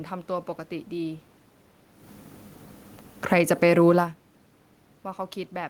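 Automatic gain falling, 3.17 to 3.58 s: the gain control judged the input too loud or its background noise too strong and eased its gain down by about 4 dB, so the speech and the room noise behind it sink together, unlike the talker's own movements near 2 and 4 s.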